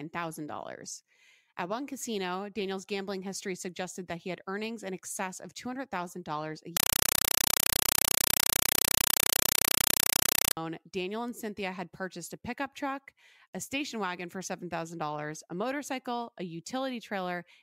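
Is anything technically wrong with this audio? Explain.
Yes. From 6.77 to 10.57 s the speech is replaced by very loud, chattering static that pulses about 31 times a second, each burst roughly 5.3 ms long with silence between. This is a compressed stream played as audio: an encoded Dolby Digital (AC-3) bitstream was passed as if it were ordinary samples and never decoded. Each compressed frame comes out as a short blast of noise followed by zero padding, giving the rapid buzzing rattle.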